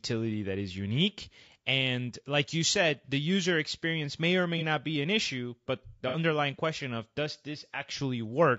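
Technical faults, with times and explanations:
Throughout: low-delay AAC compression. The speech sounds rough and grainy, with a hiss filling the gaps between the voice's harmonics and a top band that sounds thinned and somewhat synthetic. This is likely the low-delay AAC used for video calls, at around 32 kbps. Its very short frames can't resolve pitch harmonics finely and spend bits inefficiently, so the damage sits evenly across the whole clip rather than arriving in bursts like a dropout would.
3.05 to 4.63 s: AAC frame loss with concealment. Two brief smeared, noisy patches, each about 30 ms, fall at 3.05 s, after "like you said", and at 4.58 s, after "user experience may or". The decoder lost a frame and rebuilt it from the previous good spectrum with scrambled phase. The result is a short phasey blur rather than a click or a hard gap, and unlike the steady codec roughness it is local and momentary.
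6.08 to 6.17 s: AAC frame loss with concealment. A longer patch of about 60 ms, after "an issue but the" and just before "question of does", sounds as if two consecutive frames went missing. The concealment repeats and interpolates the last spectrum for longer, so the smear lasts longer.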